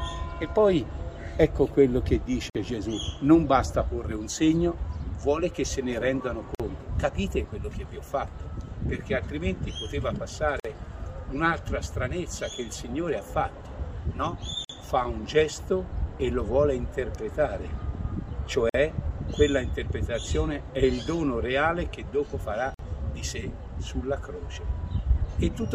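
Short silences of about 50 ms break the continuous sound at 2.50, 6.55, 10.60, 14.65, 18.69 and 22.74 s. Their edges are smeared, and the sound resumes where it stopped. Each is a gap at a join of encoded pieces: segments encoded separately, every 4 s, were joined without trimming the encoder's start delay and last-frame padding.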